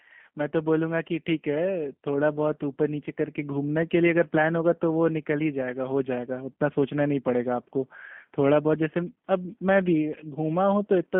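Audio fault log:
Throughout, G.729 codec: the speech is band-limited to roughly 150 Hz to 3.4 kHz, so it sounds thin and boxy, with a plainly audible rough, buzzy, synthetic edge. Each 10 ms frame is rebuilt from a filter model, a pitch predictor and a few pulses rather than the original waveform, which fits an 8 kbit/s G.729A stream. A spectrogram shows nothing above 3.4 kHz and smeared harmonics, and the waveform looks reshaped rather than faithful.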